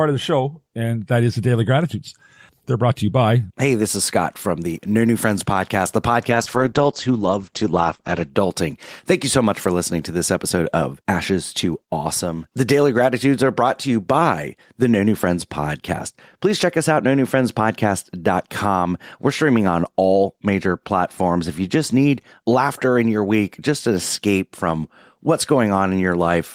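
A call bitrate drop at 6.31–8.37 s makes the speech muffled and rough, with top end gone above 8 kHz, which fits the encoder falling from about 32 to 12 kbps.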